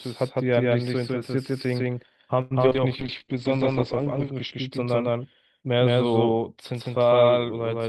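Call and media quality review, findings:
Doubled audio track, throughout: second full-band copy at roughly equal level, about 150 ms behind, no decay or room colour. Likely a slower duplicate capture path or misaligned edit.

Repeated packet loss (robotic sound), 2.41–2.76 s: choppy, robotic speech from four gaps, longest 94 ms. Concealment stretched the preceding sound over about a third of the span.

Jitter buffer slow-down, 2.80–3.26 s: speech slowed to 90% with pitch unchanged, 55 ms added. Receiver repeated pitch periods to rebuild its reserve.

Call bitrate drop, 3.00–4.77 s: rough, muffled speech, bandwidth narrowing from 20 kHz to 8 kHz, worst for 1.2 s. Consistent with Opus encoder cut from about 32 to 9 kbps.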